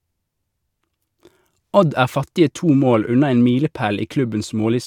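No technical faults occur at any point in the recording, so there is nothing to place in time order.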